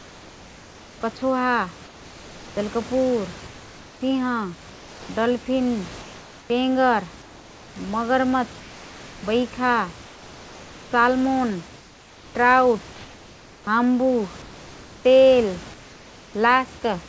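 Comfort noise in place of the background fills the pauses at 0.0–1.01, 1.85–2.57, 3.47–5.09, 6.02–7.76, 8.6–9.23, 10.04–10.91, 11.78–12.35 and 15.74–16.34 s. In each gap the room noise drops out and a flat, featureless hiss takes over, in most of them about 3 dB quieter (about 2 dB in the last gap). The real background returns when the speech resumes. The likely cause is discontinuous transmission: the sender goes quiet and the receiver synthesises noise to cover the silence.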